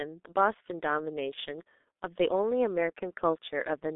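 From start to finish, the speech passes through the G.723.1 codec, and the damage is heavy. The line band runs only from 250 Hz to 3.6 kHz. Low warmth and upper brightness are both gone. The codec codes sound in 30 ms frames and refreshes its voice model slowly. Consonants smear together, and the voice turns muffled and hoarse. The coarse texture fits a bitrate near 6.3 kbit/s.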